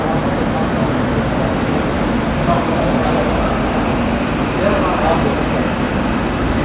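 Nothing technical stands out in this recording of sounds; there are no problems to point to.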